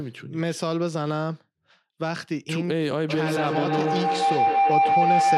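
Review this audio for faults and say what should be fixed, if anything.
A feedback howl starts at 3.09 s and runs to the end at 5.37 s. Two devices on the same call share one room, so each trip through microphone and loudspeaker comes back louder, narrowing to a tone around 700 Hz that pulses roughly every 150 ms and peaks about 6 dB above the speech. Unlike ordinary echo, whose repeats fade, these grow. To prevent it, mute all but one device in the room.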